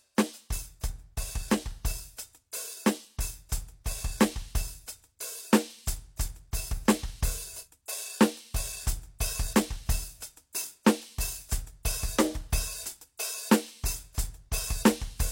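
At 9.19 s and again at 13.17 s there's pre-echo on a couple of sharp attacks in the music. The codec spread its quantisation noise across the whole transform block, so the noise meant to hide under the loud hit leaks into the quiet moment just before it. You get a short hiss about 16 ms ahead of each attack, and the hit itself loses its snap and sounds smeared.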